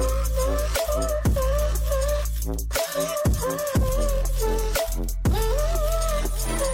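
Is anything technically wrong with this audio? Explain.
No, nothing technically wrong turns up anywhere in this audio.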